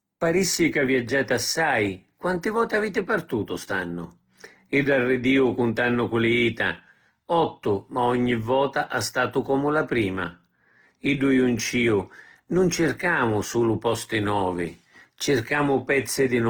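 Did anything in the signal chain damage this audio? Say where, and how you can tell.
Yes, at the codec: the speech is grainy and rough throughout, yet reaches 20.1 kHz without MP3-style swirl. That is likely Opus compression, CELT mode.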